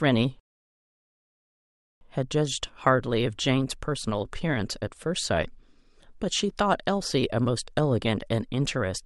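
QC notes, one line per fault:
0.40–2.01 s, rebuffering stall: the speech drops to dead silence for about 1.6 s and then picks up exactly where it left off, with nothing skipped or repeated. That's the player running dry on downloaded audio and sitting idle until enough data arrives to continue. Since it pauses instead of dropping anything, you don't hear a jump in the speech. You just get a gap that stretches the clip by that 1.6 s.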